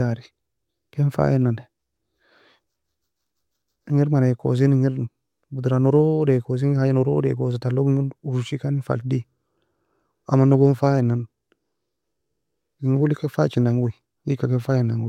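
No technical faults are audible.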